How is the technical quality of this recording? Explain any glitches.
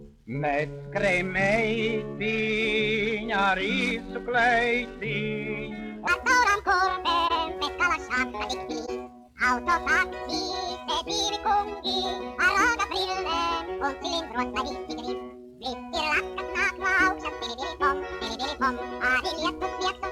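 The recording has two kinds of fault. The second two thirds are played too fast, and there are two brief concealed dropouts inside that stretch.

From 6.07 s to the end, the section is at the wrong speed. It runs 1.73 times too fast. Pitch rises by about ten semitones and everything sounds high and hurried. The likely cause is playback or editing against the wrong clock, which shifts speed and pitch together.

At 7.28 to 7.31 s and again at 8.86 to 8.89 s, there is a corrupt frame concealed. The decoder detected damaged compressed data and papered over it. The length fits one damaged frame at the first and two at the second.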